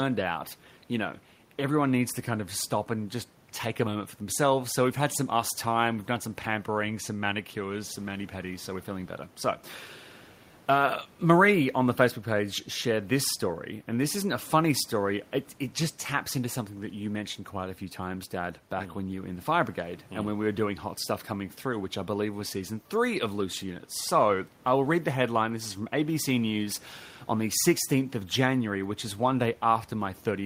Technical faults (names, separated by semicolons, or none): none